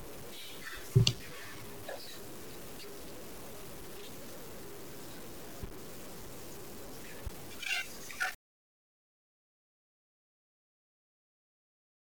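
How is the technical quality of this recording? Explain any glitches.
The recording has poor technical quality, with constant grainy distortion and two sharp pops.

Low bit depth without dither runs throughout: the speech sounds gritty, with a quantisation error that tracks the signal and sits not far below it, which fits truncation to about 7 bits.

Loud pops occur at 1.00–1.03 s and 7.26–7.29 s, single sharp clicks well above the speech, the second louder, likely voltage transients from a switch or connector.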